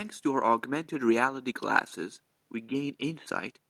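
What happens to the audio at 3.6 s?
At 3.6 s, just before the end, the audio carries on cleanly with no dropout, click, distortion or other fault.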